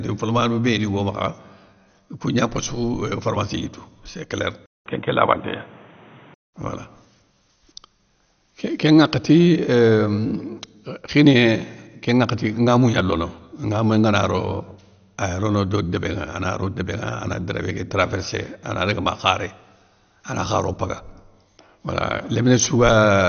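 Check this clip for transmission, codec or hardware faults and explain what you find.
Two faults are audible: codec damage through the whole clip, and a short drop to a poorer input.

The first is MP2 compression, likely at a low bitrate. Nothing survives above 6.5 kHz, so the speech sounds dull from start to finish. MPEG Layer II divides the spectrum into 32 sub-bands and shares out a small bit budget. The upper bands get nothing and switch off. The remaining bands are quantised coarsely. The result is a plainly audible gurgling, granular texture. The dullness and damage fit a rate near 48 kbps.

The second fault runs from 4.66 to 6.54 s. The input is switched to a poorer device, likely another microphone or a headset in call mode. About 200 ms of silence marks the switch. The new device passes almost nothing above 3.8 kHz, so the speech turns boxy and narrower still. Its level shifts by roughly 5 dB. 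It adds its own background noise, around 30 dB below the speech. At 6.54 s the original input returns and the wider sound comes back.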